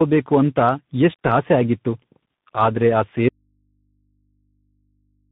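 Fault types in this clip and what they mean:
Tandem speech coding: The speech passed through three different speech codecs in a row, being decoded and re-encoded at each link, so the damage stacks. It sounds rough, muffled and warbly, with nothing above 3.8 kHz. The chain fits a CVSD Bluetooth link at each end.
Audio dropout to a faint residue: At 3.29 s the speech cuts out abruptly and does not return before the end. Only a faint mains hum remains, roughly 50 dB below the speech. The path after the break stayed live, likely a lost input signal.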